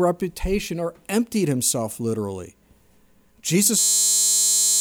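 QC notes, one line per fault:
3.79–4.80 s, system hang loop: a frozen 10 ms buffer repeats, giving a steady 100 Hz buzz that replaces about a second of sound; harmonic lines every 100 Hz on the spectrogram.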